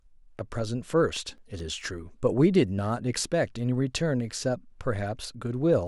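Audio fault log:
1.17–2.24 s: CD scratch ticks. Six short ticks, each a couple of milliseconds at most, repeat with each disc rotation as a scratch overwhelms error correction and the player patches or mutes samples. They show as thin vertical broadband lines and brief waveform notches.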